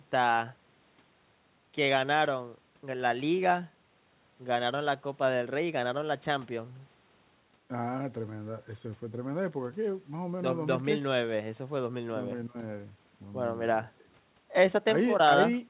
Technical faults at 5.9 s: none

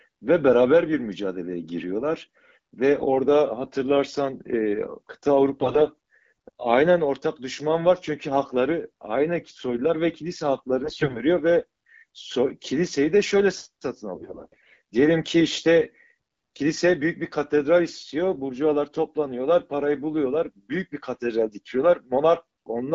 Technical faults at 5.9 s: AMR bit errors

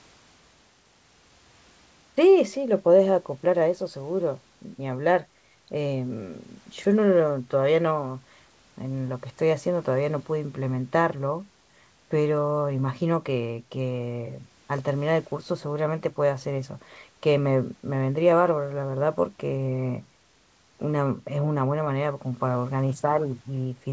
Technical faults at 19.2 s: none

